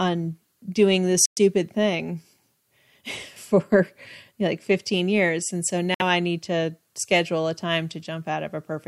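At 1.26 s and 5.94 s, speech drops to silence for 114 ms and 57 ms, then resumes where it stopped. That fits a Bluetooth stall, likely a drained headphone buffer, rather than a skip.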